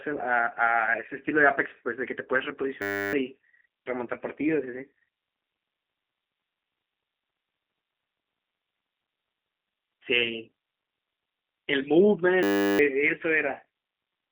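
Throughout, the speech has been squeezed through the G.729 codec, which rebuilds it from a vocal tract model, pitch prediction and a few pulses per frame, which fits an 8 kbit/s channel. The band runs from about 250 Hz to 3.6 kHz, with nothing above 3.7 kHz, and the coding leaves a plainly rough, synthetic edge.

From 2.82 to 3.13 s, and again from 12.43 to 12.79 s, there is a system hang loop: the computer stalled while the audio hardware kept replaying one 10 ms stretch of its buffer. That turns into a steady 100 Hz buzz, and roughly 0.3 s and 0.4 s of speech are lost.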